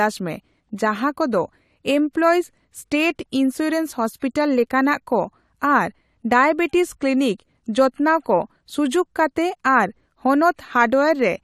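Pre-echo at about 2.13 s: a brief hiss, roughly 18 ms long, arrives just ahead of a sharp attack in the speech, so the onset loses its crispness and sounds smeared. This comes from a transform codec quantising one block as a single unit. The noise budget set by the loud attack near the end of that block gets spread across the whole block, including the quiet stretch before the attack, where it is no longer masked.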